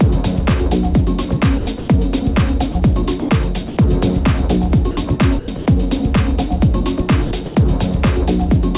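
The sender's voice detector likely switched off and on repeatedly from 1.58 to 1.88 s, 5.39 to 5.66 s and 7.25 to 7.55 s. That is sound chopped by the voice detector: roughly 150 to 180 ms of each stretch was replaced by comfort noise, so the sound turns choppy. In between, the detector likely took quiet sound for background and stopped sending entirely. This is sound dropped by the voice detector, at 2.72 to 2.75 s, 3.20 to 3.29 s, 3.68 to 3.77 s and 4.91 to 4.97 s. Each gap of 30 to 90 ms gives way to steady comfort noise before the sound resumes. Throughout, nothing above 4 kHz comes through the call path, which fits G.711 mu-law at 64 kbps.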